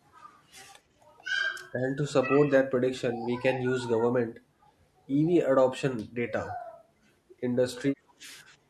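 An echo canceller that likely could not tell the near talker from loudspeaker echo while both sides spoke at once pulls the talker down along with the echo. This speech suppressed in double talk comes and goes as the other side speaks: the speech sinks by roughly 20 dB from 2.21 to 2.71 s, dips more gently at 3.63 to 3.82 s, drops by some 25 dB at 4.02 to 4.25 s, briefly ducks at 5.65 to 5.69 s, and sinks by roughly 25 dB again at 7.96 to 8.24 s. Each time the speech sounds chopped or swallowed, then snaps back.

Between those, at 6.02 to 6.13 s, the canceller clamps the microphone hard while the loudspeaker plays, producing background gated by the echo canceller. The room sound falls by about 11 dB for a tenth of a second, a short hole in the background, before the ambience returns as the canceller releases.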